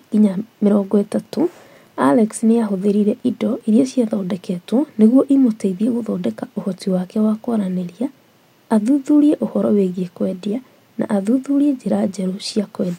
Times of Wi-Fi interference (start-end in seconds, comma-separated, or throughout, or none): 0.68-3.65